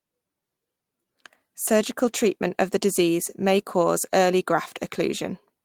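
No technical faults can be heard anywhere in the speech recording. Nothing in it calls for a time or a value to be noted.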